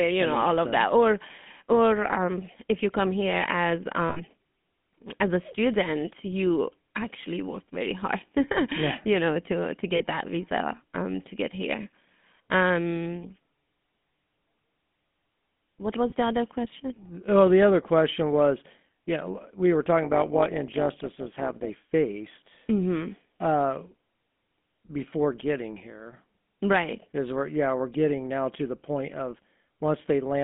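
From start to finish the speech carries the buzzy, gravelly roughness of the GSM full-rate codec. The vocal tract is modelled and driven by a sparse, regularly spaced pulse train, which fits the 13 kbps full-rate mode. The line band runs from about 150 Hz to 3.5 kHz. On a spectrogram everything above 3.5 kHz is empty, and the harmonics look smeared and grainy rather than clean. In the waveform the low end is thin.

Lost GSM frames break through three times: from 4.08 to 4.20 s (about 80 ms), from 9.96 to 10.03 s (about 40 ms), and from 16.10 to 16.14 s (about 20 ms). Each time the decoder repeats the last good frame's settings, so the sound freezes into a short, metallic ring instead of moving on. A spectrogram shows a flat, static smear in place of changing formants. The waveform shows a repeated pattern.

From 20.02 to 21.70 s an overlap-add ripple appears. The frames were reassembled with an overlap that doesn't sum to constant gain, so the level pumps up and down by about 11 dB once per frame. 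The rate is around 200 Hz, and it is heard as a metallic buzz with extra tones around each note. The waveform envelope shows regular scalloping, and a spectrogram shows evenly spaced vertical striping across the band.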